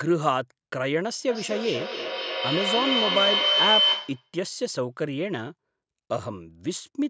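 From 1.29 to 4.36 s a feedback howl builds as the microphone-to-loudspeaker loop gains level on each pass, narrowing to a shrill tone near 3 kHz that peaks about 4 dB above the speech. Its repeats, roughly a fifth of a second apart, grow instead of fading, which separates it from ordinary echo.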